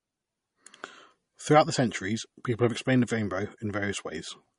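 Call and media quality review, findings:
MP3 compression, throughout: plainly audible codec damage on speech. Treble is gone above 10.6 kHz, and s sounds are watery and swirly, with smeared onsets. Likely a low-bitrate MP3 encode, fitting roughly 40 kbps. Spectrogram: a flat ceiling at 10.6 kHz, with patchy upper bands flickering on and off from frame to frame.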